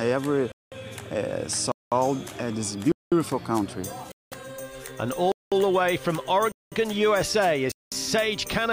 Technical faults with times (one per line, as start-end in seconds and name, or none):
0.52-0.72 gap between chunks
1.72-1.92 gap between chunks
2.92-3.12 gap between chunks
4.12-4.32 gap between chunks
5.32-5.52 gap between chunks
6.52-6.72 gap between chunks
7.72-7.92 gap between chunks